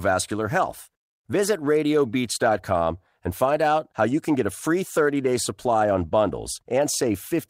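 No technical faults can be heard anywhere in this speech recording. Nothing interrupts or disturbs the audio at any point along its timeline.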